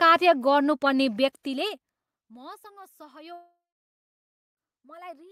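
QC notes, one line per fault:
3.33 to 4.59 s, long network dropout: the speech breaks off and its last sound is stretched into a buzzy tail that fades over roughly a quarter of a second, followed by about 0.98 s of silence. Speech then resumes at 4.59 s with about 1.24 s of it gone. The likely cause is a stall in incoming audio: the receiver first extended the last sound to mask the gap, then went quiet until data arrived again.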